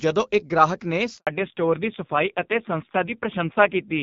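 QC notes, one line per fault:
1.17 to 1.27 s, handover gap: Right after "ਇੱਕ ਗ੍ਰਾਹਕ ਨੇ" the speech drops out for about 100 ms. It fades within a few tens of milliseconds and then there's just dead air. That's the call being passed from one network to another, with no speech frames getting through while the link switches over. Whatever was said in that window is gone for good, so don't expect to recover it.
1.27 s to the end, fallback to narrowband: When the speech comes back after the gap it's lost all its top end. There's nothing above 4 kHz for the rest of the clip. Before the switch it was clean HD Voice with only light codec wear. After it, the voice sounds duller and rougher, which fits a low-rate AMR narrowband mode of around 5.9 kbit/s taking over after the handover.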